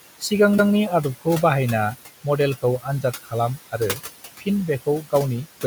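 Noise suppressor artifacts run through the whole clip. The room noise, sitting about 13 dB under the speech, gets pulled down by about 16 dB between phrases and pops back up under them, so the background pumps.

Speech cut by the noise suppressor shows up three times: 2.62–3.33 s, 3.57–4.0 s and 4.86–5.13 s. The suppressor mistakes quiet bits of speech for noise and ducks them, by up to about 14, 17 and 16 dB. Only brief stretches, a fifth of a second or less each time, actually drop, so a few soft sounds just go faint.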